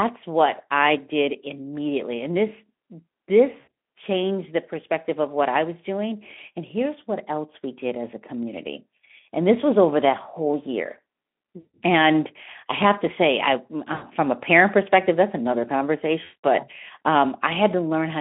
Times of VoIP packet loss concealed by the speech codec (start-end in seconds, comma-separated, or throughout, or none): 3.59-3.67, 11.59-11.77, 13.93-14.06, 16.23-16.45